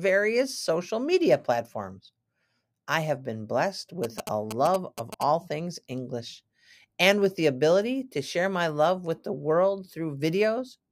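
Speech, with a stretch of GSM signalling bursts from 4.04 to 5.23 s, right after "I have been blessed". You get that galloping dit-dit-dit of short buzzes repeating at about 217 Hz, sitting roughly 10 dB under the speech. That's a 2G phone nearby doing its signalling chatter rather than a full call, sending short groups of radio bursts that some part of the audio circuit rectifies and turns into audible buzzes.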